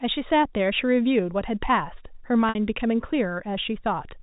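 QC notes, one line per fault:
2.49–2.55 s, packet loss with pitch repetition: about 60 ms of speech is missing, which fits two lost packets. The receiver filled the hole by looping the last pitch cycle, so the sound briefly holds on a buzzy, steady tone that decays toward silence before speech cross-fades back in. A plain dropout would be a hard gap, and a jitter stutter would repeat whole chunks. The G.711 telephone coding itself is working normally.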